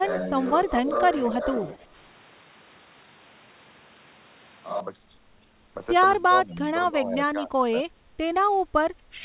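From the opening until 4.80 s the speech sounds like a switch to a distant microphone, likely because the close microphone was lost. The voice is roomy and hollow, thin in the bass, with steady room noise about 25 dB below the speech, though the level hardly changes. On a spectrogram, reverberant tails smear each syllable and a noise floor fills the gaps. At 4.80 s the sound snaps back to a dry, close quality.

Between 0.64 and 1.95 s there is speech suppressed in double talk, likely an echo canceller ducking the talker while the far side also spoke. The speech dips by about 5 dB in patches, about 0.7 s in all. Deeper dips of about 10 dB follow at 6.19 to 6.75 s and 6.91 to 7.52 s, each about 0.3 s in total, and a brief 5 dB dip sits at 7.72 to 7.85 s. The waveform shows bites out of the envelope, and the spectrogram shows matching faint vertical gaps. Throughout, the call path cuts everything above 4 kHz, which fits G.711 A-law at 64 kbps.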